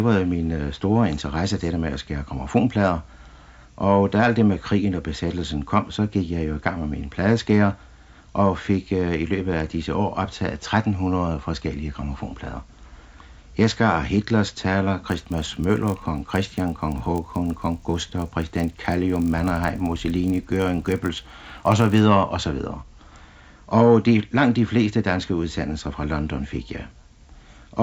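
From 15.08 to 22.0 s a 50 Hz buzz rides on the sound: the resampler restarted on every 20 ms block, apparently converting 16 kHz to 48 kHz, leaving an error at each block edge.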